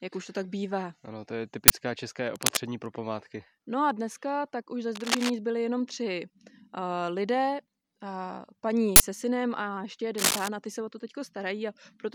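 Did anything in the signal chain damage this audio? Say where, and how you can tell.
Yes, at the driver or buffer stage. There's an uninitialised buffer at 1.68 to 1.70 s and again at 8.96 to 9.00 s: sharp, very loud bursts of digital garbage lasting 20 ms and 40 ms. That points to blocks being played out before the speech was written into them, so stale memory came out as samples.

In the analogue wiring there's cable scratch noise at 2.35 to 2.58 s, 4.95 to 5.31 s and 10.18 to 10.48 s. These are ragged scratchy rustles sitting around or a bit above the speech level. They're likely a worn cable or connector being moved, with the contact resistance jumping around.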